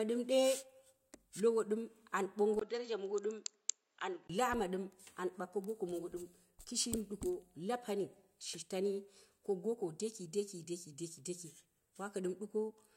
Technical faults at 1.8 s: none

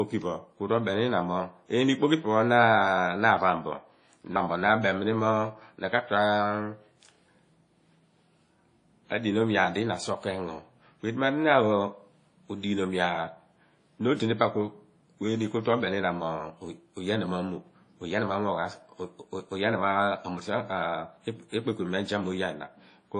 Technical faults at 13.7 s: WMA compression

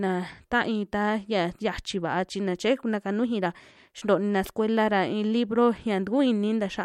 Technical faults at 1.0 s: none

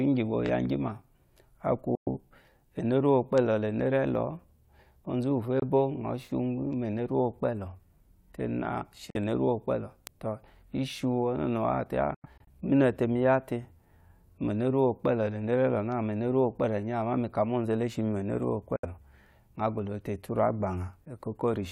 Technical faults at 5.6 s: Bluetooth dropout

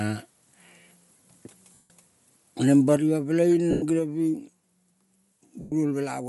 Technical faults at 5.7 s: Bluetooth LC3 compression; lost LE Audio frames

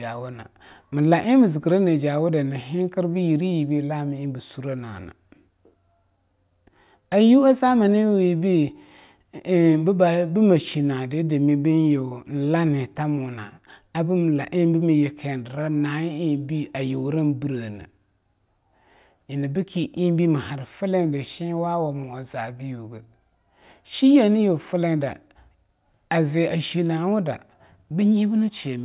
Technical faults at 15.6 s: none

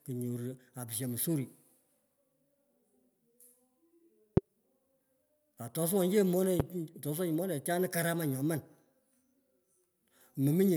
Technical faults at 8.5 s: none

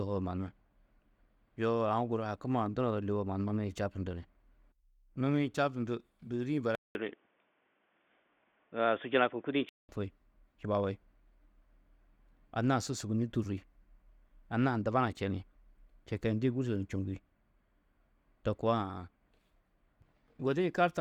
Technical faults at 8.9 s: input switched to a poorer device

